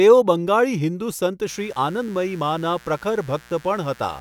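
From 1.46 s, after "બંગાળી હિંદુ સંત", a mains buzz enters and lasts to the end. Spikes from the 60 Hz supply leak in, giving a steady raspy buzz well below the speech.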